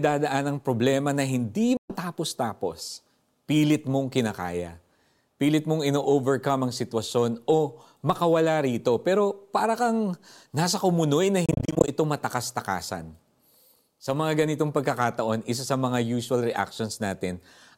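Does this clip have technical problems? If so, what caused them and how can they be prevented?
Yes. Two Bluetooth dropouts: silence from 1.77 to 1.96 s, then scattered short gaps from 11.46 to 11.89 s, longest 28 ms. Both are likely caused by wireless packets arriving late and being discarded, with the speech resuming further on as if it had kept playing. Keeping the headphones close to the source with no obstructions and less 2.4 GHz interference prevents this.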